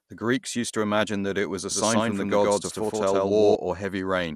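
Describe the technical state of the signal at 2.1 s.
At 2.1 s you're inside a doubled audio track, running 1.71 to 3.55 s: a second copy sits roughly 150 ms behind at about equal level, with no decay, so everything sounds stuttered. Over the whole clip there's plainly audible dull, gurgly grit, likely MP2 compression at a low rate, with nothing above 15.1 kHz.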